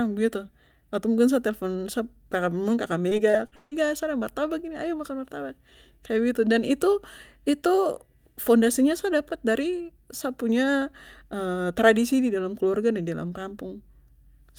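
From 3.09 to 3.73 s, just before "sa ada martabak ini", the speech breaks up with repeated packet loss (robotic sound). Roughly five dropouts, the longest 156 ms, are bridged by extending prior audio, so about 41% of the stretch is patched and it sounds choppy.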